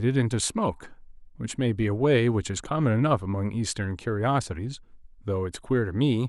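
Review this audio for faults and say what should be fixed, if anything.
Nothing in this speech recording needs fixing; no faults are audible anywhere in it.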